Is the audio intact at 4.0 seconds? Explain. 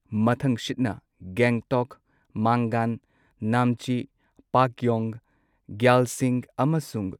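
Yes, the speech is intact at 4.0 seconds, with no fault audible at that moment.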